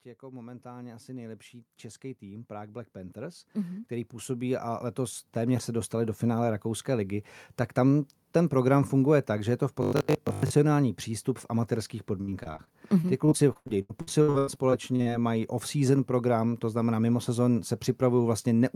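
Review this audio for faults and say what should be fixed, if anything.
Automatic gain rising occurs twice: from 0.2 to 1.51 s the level climbs by about 6 dB, then from 2.19 to 6.21 s by about 13 dB. Speech and background noise swell together because the gain control judged the input too quiet and raised its gain gradually. On a waveform the envelope widens steadily over each span, and on a spectrogram the noise floor brightens along with the speech. Setting a sensible fixed input level, or slowing and capping the AGC's gain range, would prevent this.

Robotic sound from repeated short buffers runs from 9.83 to 10.53 s, between "že je to v" and "přístup v amatérských". The speech turns into a rigid, metallic buzz at 50 Hz, with most of the span made of repeats. The likely cause is audio arriving too seldom, so the last 20 ms or so is replayed in place of the skipped audio. On a spectrogram this appears as evenly spaced horizontal harmonics at multiples of 50 Hz, and the waveform shows one short cycle copied over and over. 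A larger, steadier audio buffer or a fix to the scheduling would prevent it.

Repeated packet loss (robotic sound) begins after "přístup v amatérských" and lasts from 12.21 to 15.08 s. Some two dozen holes, the longest 90 ms, are each patched by extending the preceding sound, giving choppy, robotic speech with pieces missing. About 28% of the span, roughly 0.8 s, is concealed. On a spectrogram the stretch shows frozen, smeared patches alternating with normal detail, and the waveform shows abrupt joins. A more reliable network path, a deeper jitter buffer or forward error correction would prevent it.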